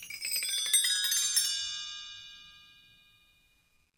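No technical faults occur anywhere in the clip, so there is nothing to describe in time order.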